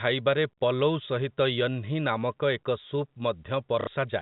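At 3.81 s, lasting until 3.87 s, there is packet loss with the last packet repeated: about 60 ms of speech went missing and the receiver looped its previous packet to fill the gap. The 60 ms gap points to two lost packets. The loop ignores the pitch, and the repeat gives a brief robotic stutter. The speech has the band-limited sound of G.711 telephone coding.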